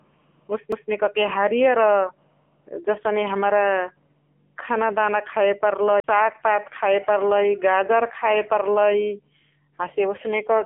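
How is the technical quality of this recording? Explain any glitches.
Technical quality is poor: the whole recording passes through a low-rate mobile codec, and two brief skips break the playback.

AMR narrowband mobile codec, throughout: the speech sounds thin, boxy and buzzy, with a synthetic edge and nothing audible above 3.5 kHz, confined to roughly a 200 Hz to 3.4 kHz telephone band. The heavy damage fits a bitrate around 6.7 kbps. The codec rebuilds the voice from a vocal-tract model excited by a handful of pulses per frame, so at this rate much of the natural texture is replaced by artificial buzz.

CD skip, at 0.72 s and from 6.00 to 6.04 s: each is a tick with a tiny dropout followed by an abrupt shift in the flow of speech. The first is a mute of only a few milliseconds. The second lasts around 40 ms. In both, the laser has jumped to a different turn of the disc's spiral, and the player briefly silences output before resuming from the new position.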